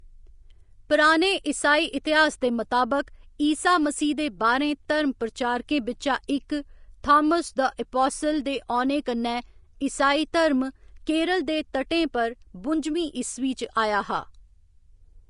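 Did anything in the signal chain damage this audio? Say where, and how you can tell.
Yes, at the codec. The speech is grainy and hissy throughout and stops at 10.5 kHz. Coarsely quantised treble points to likely Vorbis compression near 34 kbps.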